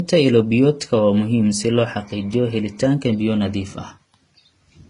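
Transcoding between lossy codecs runs throughout the clip. The speech has nothing above 10.5 kHz, and two distinct kinds of coding damage are layered together. The sound fits a low-rate HE-AAC stage of around 24 kbit/s feeding a Vorbis encode near 33 kbit/s. The second encoder likely spent its scarce bits reproducing the first one's artefacts, then added its own artefacts, while the earlier band limit remained.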